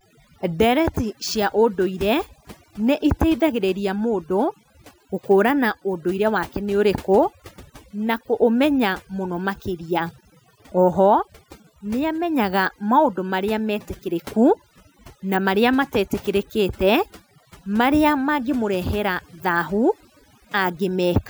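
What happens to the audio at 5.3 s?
At 5.3 s the speech carries overdone noise removal, present across the whole clip rather than starting there. Frequency bands near the noise estimate are pushed almost to silence, taking quiet speech detail with them. The background becomes near-silent with twinkling specks. A spectrogram shows dark gaps dotted with isolated bright flecks and ragged, hollowed-out harmonics.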